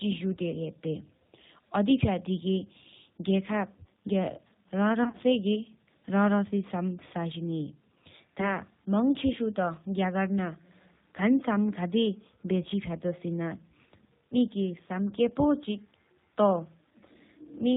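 Speech, carried throughout by the G.729 codec at 8 kbit/s. Its band stops at 4 kHz, so the top end sounds cut off. The codec rebuilds each 10 ms frame from a vocal tract filter, a pitch predictor and a few pulses. That leaves the voice plainly rough and slightly synthetic.

There is VoIP packet loss concealed by the speech codec at two points. From 5.04 to 5.17 s, about 70 ms of audio goes missing in gaps scattered over 100 ms, with the longest run 30 ms. The decoder fills each gap by repeating its last pitch and filter at falling gain. The voice is stretched into a fading tone or noise and turns weak, and it stays smeared briefly after the gaps end. At 8.41 to 8.46 s a single 10 ms loss gives a shorter blur.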